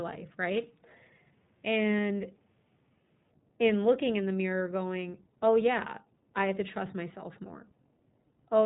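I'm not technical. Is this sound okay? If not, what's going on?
No. The whole recording sounds thin, muffled and slightly rough or robotic. That is the iLBC codec, a phone-call compression that drops all high tones and rebuilds the voice approximately. At about 5.0 s, right after "looking in the mirror" and before "oh yeah i have", there's a tiny buzzy hiccup. That is lost iLBC frames: one 20 ms chunk went missing and was patched by repeating the previous sound.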